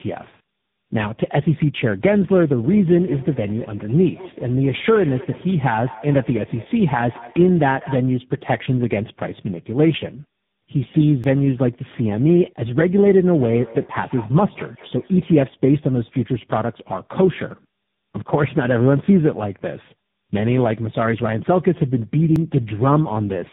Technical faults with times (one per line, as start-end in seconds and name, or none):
0.00-23.52 tandem speech coding
2.63-8.09 feedback echo between two devices
11.24 dropped buffer (overrun)
22.36 dropped buffer (overrun)